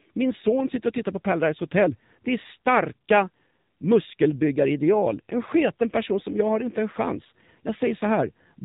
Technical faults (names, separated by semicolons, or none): AMR narrowband mobile codec